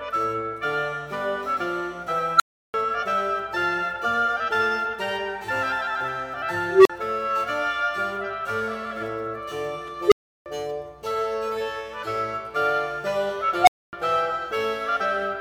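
An unstable filter runs away four times, at 2.36, 6.69, 10.07 and 13.61 s. Each time a tone (a squeal near 1.5 kHz first, then lower beeps) swells in 36 to 161 ms, clips and overflows, leaving silence of 43 to 341 ms.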